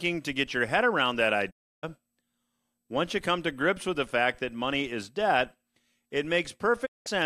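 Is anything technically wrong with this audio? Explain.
Yes. Two digital broadcast dropouts occur, at 1.49 to 1.85 s just after "your head around that" and at 6.85 to 7.08 s after "money is debt it". The receiver stopped getting valid frames, whether from signal loss or failed checksums, and muted until clean data resumed. The speech fades out over about 20 ms into silence and then returns, with roughly 0.3 s and 0.2 s of programme simply missing. That gap length points to runs of roughly a dozen and eight lost frames.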